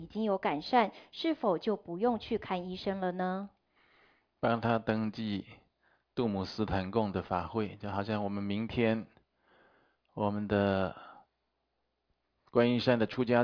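Nothing in this recording stood out as a technical problem on listening.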